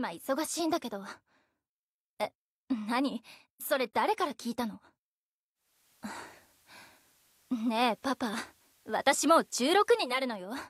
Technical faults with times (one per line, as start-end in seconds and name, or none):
5.54-10.27 digital radio blending to analogue